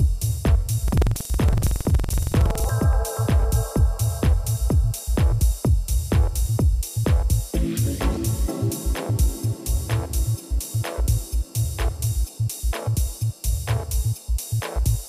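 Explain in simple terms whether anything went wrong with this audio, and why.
From 0.84 to 2.70 s there's buffer tearing: a rough, robotic rattle about 21.5 times a second, which fits a 2048-sample buffer. The playback lost sync with its buffer, so roughly a tenth of each chunk replays audio from about a tenth of a second earlier.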